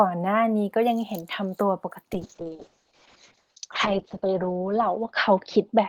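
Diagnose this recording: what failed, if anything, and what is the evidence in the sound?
Call bitrate drop at the codec from 2.14 s: at 6 kbps instead of 40, speech turns coarse and muffled, bandwidth narrowing from 20 to 8 kHz.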